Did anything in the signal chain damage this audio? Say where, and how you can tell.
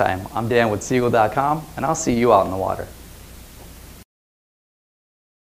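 No, nothing in the signal chain has left an audible mark on this audio. No stage, from capture through to playback, gives itself away in what can be heard.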